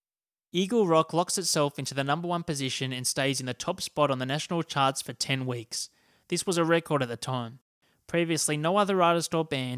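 No technical faults can be heard at any point in the speech, so there are none to describe.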